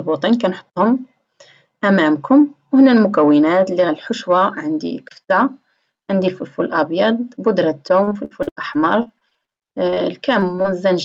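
From 8.03 to 9.98 s there's repeated packet loss, the robotic-sounding kind. Packets keep dropping or arriving late, the longest hole about 79 ms, and each is patched by stretching the previous sound. Roughly a quarter of that stretch is filled-in material, so it comes out choppy with bits missing.

Right after, short concealed packet loss hits three times: 10.40 to 10.44 s, 10.56 to 10.60 s and 10.62 to 10.66 s. Each is about 20 ms of missing audio filled by continuing the last sound and then blended back, giving quick smears or wobbles. All of this rides on an Opus call path with audio extending up to 8 kHz, at a bitrate of around 64 kbps.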